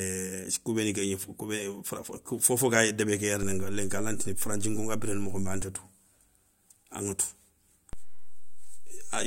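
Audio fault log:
3.43 to 5.62 s and 7.93 s to the end, DC step: a low thump at 3.43 s and another at 7.93 s, with the speech carrying on unchanged. The waveform's zero line jumps by about -27 dBFS, then about -28 dBFS, and each sudden shift is heard as a thump.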